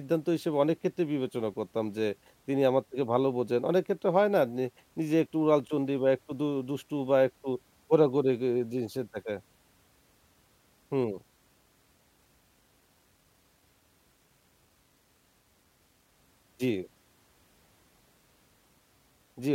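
From start to finish the speech carries a grainy, gritty edge that rises and falls with the sound itself, strongest as syllables fade and in the quietest moments, where it sputters or drops to dead silence between steps. This is low bit depth without dither, likely from rounding to around 10 bits, leaving distortion roughly 45 dB below the signal. A zoomed waveform shows visible stair-steps; the spectrogram shows signal-following hash rather than a steady noise floor.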